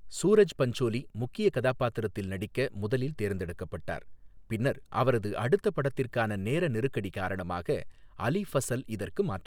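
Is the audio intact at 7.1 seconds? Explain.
Yes, the audio is intact at 7.1 seconds, with no fault heard at that moment.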